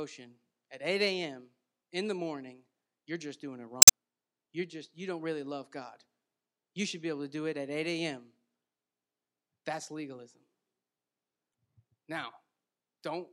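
A speech clip with two spots of damaged data in a compressed stream: a short glitch at 3.80–3.90 s, right after "you're just doing it", and a briefer blip at 11.50–11.53 s. In both, corrupted bytes throw the decoder off, and it garbles those frames while hunting for the next valid header.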